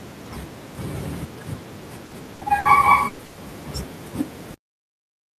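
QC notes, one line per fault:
2.05–2.14 s, 2.35–2.44 s, 2.59–2.68 s, burst of packet loss: about 60 ms of audio goes missing each time. The receiver stretches the last sound it had across the gap and fades it, giving a brief held buzz or hiss before the sound picks up further along.
3.07–3.22 s and 3.25–3.40 s, burst of packet loss: longer dropouts of about 120 ms each, close together. The concealment carries the preceding sound through the gap with no silence, decaying as it goes, so a held buzz or hiss replaces the missing stretch before playback jumps ahead.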